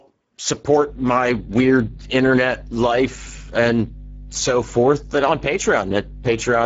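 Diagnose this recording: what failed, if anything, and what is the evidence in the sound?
Codec stage: Speex codec damage is plainly audible throughout. Speech sounds hoarse and noisy, with nothing above 7.7 kHz, which fits a low Speex setting near 10 kbps rather than simple band-limiting.

Analogue wiring: mains hum, a steady 50 Hz tone, enters at 0.84 s and lasts to the end, roughly 15 dB below the speech. A ground loop or a nearby transformer is the cause, not codec noise, since this tone is pitched and constant.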